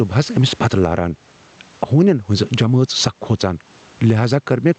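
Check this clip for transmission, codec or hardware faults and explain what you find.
One fault runs through the whole recording: gain pumping. No dropouts or glitches appear alongside it.

Gain pumping is present from start to finish. The swing is roughly 10 dB. The likely cause is a microphone gain set far too high, with a fast compressor or limiter clamping it on every loud syllable. The room noise sits about 41 dB below the speech. Loud and quiet passages end up squeezed close together, and the speech sounds flattened.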